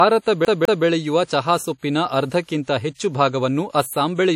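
A transform codec, likely WMA at a low bitrate around 48 kbps, has spread quantisation noise across its long blocks throughout this speech. The WMA compression is plainly audible as a washy, ringing quality with hiss that swells and fades with the signal, and nothing above 16.9 kHz survives. Between 0.45 and 0.86 s, a CD stuck on one turn throws playback back to the same spot, so a 203 ms stretch repeats twice with a brief mute at each jump, giving a fast, even stutter. Pre-echo appears at 1.24, 1.78, 2.44 and 2.63 s, the last two just before "ಹೆಚ್ಚು ಭಾಗವನ್ನು". In each case an attack near the end of a codec block leaves noise sized for the loud part filling the quiet moment before it. About 46 to 52 ms of hiss leads each onset, and the attack sounds softened and smeared.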